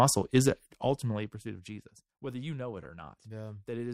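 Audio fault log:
0.48–1.84 s, zipper noise: gain fell about 20 dB in unsmoothed 1 dB steps, roughly thirty per second, each step clicking into a zipping tick before "whether you know it".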